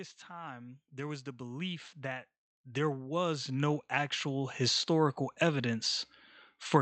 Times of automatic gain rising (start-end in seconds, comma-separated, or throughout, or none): 0.28-4.93